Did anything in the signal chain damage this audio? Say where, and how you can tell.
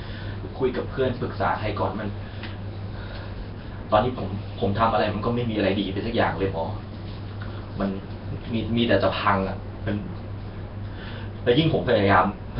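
Yes, at the codec stage, throughout the speech. It sounds rough, hissy and smeared, almost underwater, with nothing above 5.3 kHz. That points to heavy, low-bitrate coding near 22 kbps, likely Nellymoser compression. Quiet bands got zero bits and were replaced with noise.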